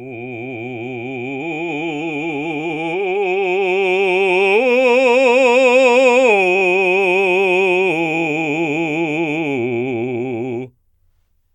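No technical fault can be heard anywhere in this music recording. Nothing interrupts or damages the sound at any point.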